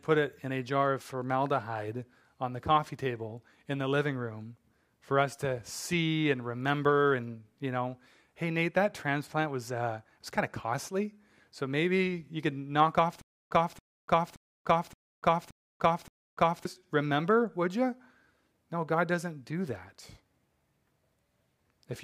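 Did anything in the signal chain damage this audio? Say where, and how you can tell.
Yes, a stutter with silent gaps at playback, 13.21 to 16.65 s, just after "you could knock off". A 0.28 s burst repeats six times, each followed by 0.30 s of digital silence. The player likely stalled and replayed its last fragment each retry, losing the real audio there.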